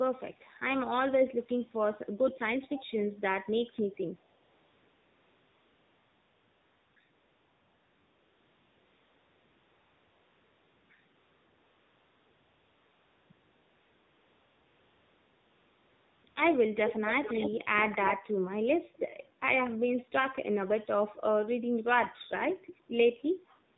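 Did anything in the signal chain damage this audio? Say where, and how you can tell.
Yes, the damage comes from the codec stage of a mobile call. The speech has the AMR narrowband mobile codec sound throughout: nothing above 4 kHz, and a plainly buzzy, synthetic edge to the voice, which fits a low rate of about 7.4 kbps. A simple band-limit or a telephone filter would dull the top end but keep the voice natural. Here the vocal-tract model, rebuilt from a few pulses per subframe, gives the speech that coarse, artificial texture.

The same call chain also shows AMR comfort noise. The sender stopped sending speech frames during pauses, and the receiver filled them with smooth synthetic noise at 4.44 to 6.96 s, 7.14 to 10.90 s, 11.16 to 13.30 s, 13.32 to 16.24 s, and briefly from 16.28 to 16.36 s. The background turns into a steady, featureless hiss that switches in and out at those edges. 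A noise gate would drop to silence instead, and a real room tone would not change character when the speech stops.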